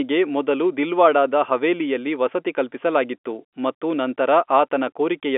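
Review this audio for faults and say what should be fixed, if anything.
Nothing here needs fixing: the speech comes over an ordinary G.711 telephone line, so it sits in the usual narrow phone band with nothing above about 3.7 kHz, which is simply how that format sounds.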